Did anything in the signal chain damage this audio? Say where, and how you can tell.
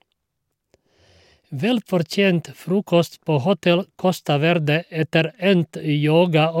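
Yes. A faint hiss-like roughness rides on the speech throughout, growing on loud and bright sounds and dropping away in pauses. That points to sample clock jitter at the converter: a clock wandering by around half a microsecond mistimes samples, leaving error roughly 50 dB down.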